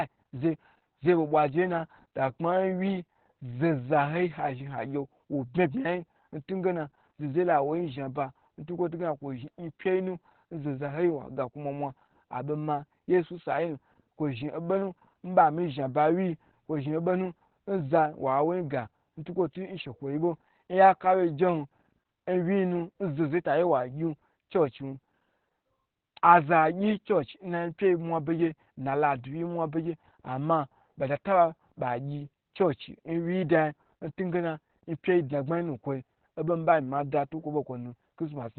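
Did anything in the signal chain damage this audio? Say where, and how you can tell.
Yes. The damage happened at the codec stage, and it runs through the whole clip. This is Opus voice compression in its SILK mode. The speech is muffled and confined to a narrowband response, with no content above about 19.6 kHz. It also sounds hoarse and faintly robotic throughout. That points to a bitrate of roughly 8 kbps. At that rate the linear-prediction coder keeps the spectral envelope but codes the excitation very coarsely, frame by frame. A plain low-pass or telephone-band filter would only muffle the sound. It would not add this rough, synthetic texture.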